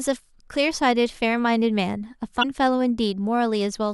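At 2.39 to 2.45 s, damaged data in the compressed stream throws the decoder out of sync: a brief glitch.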